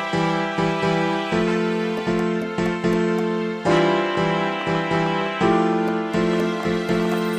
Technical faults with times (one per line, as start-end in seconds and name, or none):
4.15-7.15 train of clicks